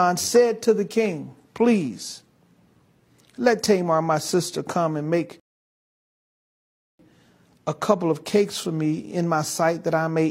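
At 5.40 s, right after "sister come and make", a rebuffering stall drops the speech into silence until 6.99 s, about 1.6 s added while the player waited for data. Speech then resumes exactly where it stopped. The waveform shows a flat gap, and the spectrogram a clean blank band.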